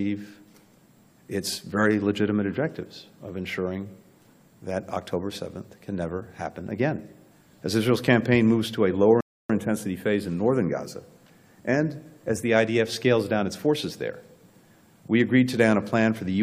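At 9.21 s the audio halts in a rebuffering stall: playback exhausted its downloaded data and waited for more. Silence runs to 9.50 s, about 0.29 s of added time, then the sound resumes exactly where it stopped, with nothing skipped.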